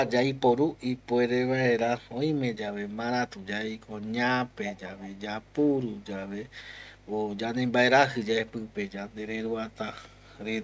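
A steady low 50 Hz tone sits under this speech clip from start to finish, about 20 dB below the voice. This is mains hum, where a ground loop or nearby transformer couples the power line into the signal path. Delayed copies of the voice trail the speech by 441 ms at 0.07 to 0.12 s and 4.66 to 5.2 s, about 15 dB down, and more weakly, near 40 dB down, at 5.43 to 5.51 s, 9.1 to 9.14 s and 9.71 to 9.77 s. This echo leak likely comes from a far end playing the call on a loudspeaker, where the echo canceller failed to remove all of the playback its microphone picked up and sent it back.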